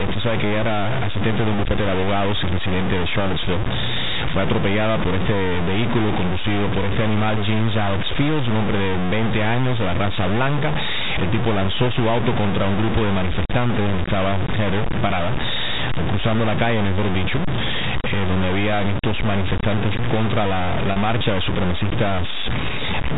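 Grainy, level-following distortion runs through the whole speech clip, with noise nearly as loud as the speech. The likely cause is low bit depth without dither, which fits 4-bit truncation.

At 15.08 s, packet loss with pitch repetition holds the sound briefly and buzzily for 20 ms. At 20.92 s, a 40 ms gap is bridged the same way, with the last pitch period repeated.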